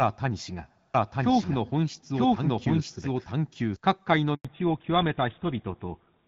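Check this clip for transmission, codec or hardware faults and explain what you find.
Three faults are audible: a doubled audio track early on, then a handover gap, then a fallback to narrowband.

From 0.94 s to 3.76 s, a doubled audio track: a second, full-band copy of the speech plays roughly a second behind the original, at about the same level. It has no reverberant tail or room colour, and it starts and stops abruptly. The likely cause is a second capture via a slower path, or an edit that left two copies offset in time. On a waveform, the same envelope shapes repeat about one second apart. On a spectrogram, each syllable's harmonic pattern reappears shifted by that delay, with hard edges where the copy begins and ends.

At 4.35 s comes a handover gap of 100 ms. While the call switched networks, no speech frames arrived, so the audio dies away within a few tens of milliseconds and stays silent until the new link starts at 4.45 s. 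Whatever fell in that window is lost. The waveform shows a short flat line after a quick fade, and the spectrogram shows a full-height blank column about a tenth of a second wide.

From 4.45 s to the end, a fallback to narrowband follows. Up to this point the clear HD Voice sound fits AMR-WB at 12.65 kbit/s. After the handover, nothing reaches above 4 kHz, which fits a drop to GSM full rate at 13 kbit/s. The speech turns duller and rougher, losing the crispness of sibilants. On a spectrogram, the energy above 4 kHz cuts off sharply at that moment and stays empty, while the lower band carries on.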